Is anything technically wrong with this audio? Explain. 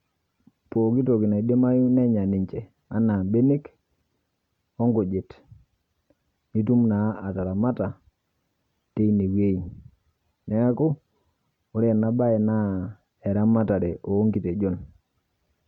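No, nothing technically wrong stood out on listening to this speech recording.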